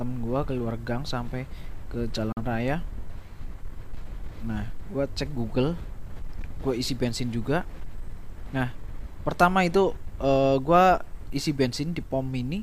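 At 2.32 s a digital broadcast dropout mutes the sound with a fade of about 3 ms, staying silent until 2.42 s. The receiver discarded what sounds like a single bad frame, so the sound resumes with about 43 ms missing. Unlike analogue fading, there is no hiss or noise burst.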